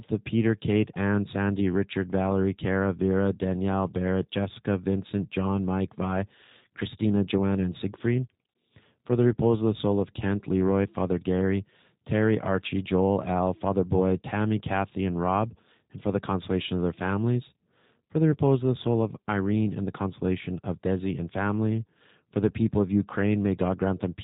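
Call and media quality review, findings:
G.729 codec damage, whole clip. Speech band-limited, nothing above 4 kHz. Rough, slightly synthetic timbre, clearly audible. Sound fits an 8 kbit/s G.729A stream. Voice rebuilt from filter, pitch predictor and sparse pulses per 10 ms frame.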